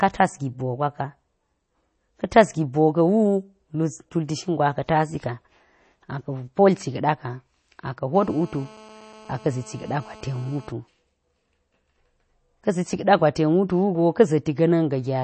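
MP3 compression damage runs from start to end: nothing in the speech reaches above 8.3 kHz, so the treble sounds sawn off, and the remaining detail has a watery, swirling texture with metallic chirps on s sounds and softened consonant onsets. This is likely heavy MP3 encoding, where a starved bit budget forces a fixed treble cut and weak frequency components flicker in and out between frames. The degree of damage fits a low bitrate around 32 kbps.

GSM phone buzz enters at 8.15 s and stops at 10.71 s: a hard, raspy drone at 217 Hz, thick with harmonics and entirely independent of the speech, sitting about 24 dB below it. A nearby 2G handset transmits in bursts at that rate, and the audio circuitry rectifies the radio pulses into sound. The buzz holds steady throughout, the pattern of a phone on an active call.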